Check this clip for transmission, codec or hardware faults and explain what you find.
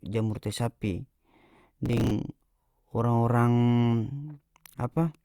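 One fault stands out, a short burst of processor overload crackle from 1.86 to 2.11 s. For about a quarter of a second the speech turns gritty and torn, with a rapid run of tiny hard-edged clicks riding on top. The cause is the processor falling behind on its small audio buffers, each only a few milliseconds long. Around ten missed their deadline, and each miss replayed a scrap of old audio instead of fresh signal, producing the crackle until the load eased.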